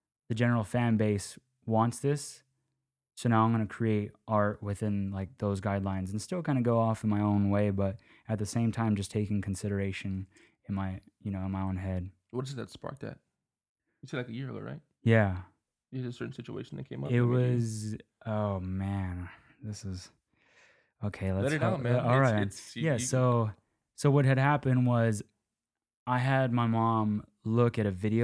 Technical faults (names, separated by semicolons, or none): none